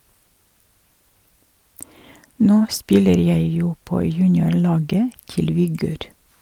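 No technical faults can be heard anywhere in the recording.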